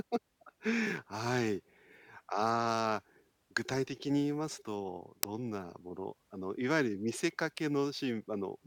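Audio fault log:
5.23 s uninitialised buffer: stale memory played before audio was written gives a sub-millisecond loud crack, which fits a 32-sample buffer.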